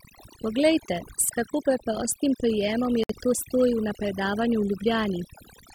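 Overdone noise removal runs throughout: the reducer cuts frequency bands near its noise estimate too hard, leaving near-silent gaps with twinkling specks. From 3.04 to 3.09 s, a likely Bluetooth stall, where interference held packets until the headphone buffer ran dry, cuts the speech to about 59 ms of silence.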